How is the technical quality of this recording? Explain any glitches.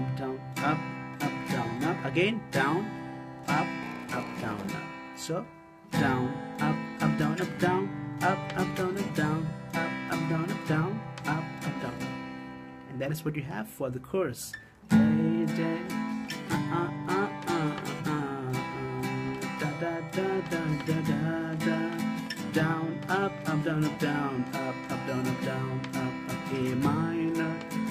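There's one clear glitch. From 3.82 to 4.68 s you get a block size mismatch (padded). One stage hands over slightly shorter blocks than the next one reads, and the leftover space in each block is filled with silence. That tiny gap repeats at 93.8 Hz, so you hear a low buzz riding on the audio, which fits a 512-sample read buffer. The sound also drags to 0.938× speed while keeping its timbre.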